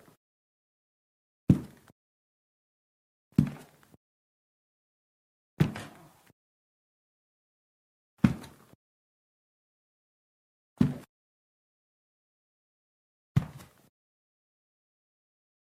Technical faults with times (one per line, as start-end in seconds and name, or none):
none